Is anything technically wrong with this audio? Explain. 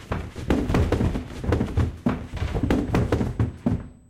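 Yes. From 2.26 s to the end, a steady, fixed-pitch whine sits at 8 kHz, roughly 45 dB below the sound. This is USB whine: the bus's 125-microsecond microframes draw current in pulses that leak through power or ground into the audio path.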